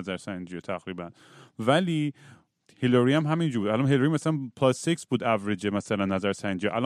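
Nothing in the recorded speech points to a technical fault: the signal holds steady and intact for its whole duration, with no event that would need a time or a cause.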